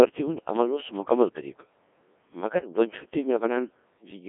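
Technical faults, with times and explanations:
Throughout, Codec 2 vocoder: speech rebuilt from sine waves sounds heavily robotic and buzzy, fitting a 1.6 kbit/s mode; spectrogram shows harmonics within 250 Hz–3.5 kHz, empty above 3.8 kHz.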